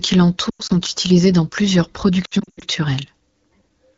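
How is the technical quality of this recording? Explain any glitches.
The recording has two patches of lost AMR speech frames over a clear AMR wideband sound, consistent with a 12.65 kbit/s mode.

From 0.49 to 0.72 s, just before "utilisés dans plusieurs", about 120 ms of frames are lost across 200 ms, with the longest run at 100 ms. Corrupted radio frames fail their checksum, and the decoder extends the last good frame at falling gain. The sound warbles, then drops to near silence within two frames rather than cutting off at once like a plain dropout.

From 2.25 to 2.64 s, after "utilisés dans plusieurs", about 220 ms is lost across 360 ms, with the longest run at 80 ms. The same quick drop to near silence recurs, followed by a brief weak, rough onset.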